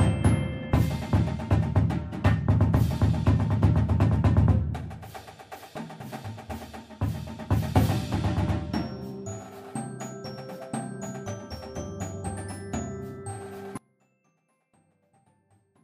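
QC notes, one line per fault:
13.77–15.84 s (to end), audio dropout to a faint residue: the wanted signal was likely lost upstream while the path after the break stayed live, so the output never went fully silent. At 13.77 s the sound cuts off abruptly mid-flow and does not return before the clip ends. What remains across those last two seconds is only a faint leak of the sound, roughly 30 dB below its normal level. The hard edge sets it apart from a natural pause or a fade-out.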